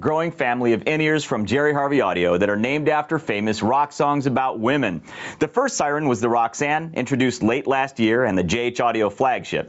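Gain pumping runs throughout. The gain swings by roughly 15 dB, likely from input gain set far too high with a fast limiter clamping it. On a waveform the envelope looks flattened, and a spectrogram shows the noise floor breathing.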